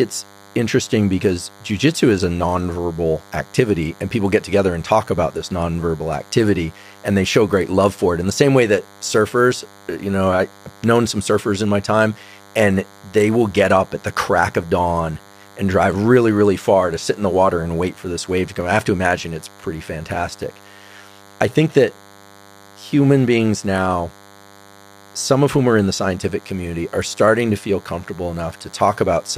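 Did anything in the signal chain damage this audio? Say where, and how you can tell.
Yes, in the analogue wiring: there's a DECT cordless phone buzz running the whole way through, a steady, thin 100 Hz buzz with lots of harmonics, sitting around 25 dB under the audio. A nearby DECT handset or base bursts every 10 ms, and the analogue circuitry rectifies those bursts.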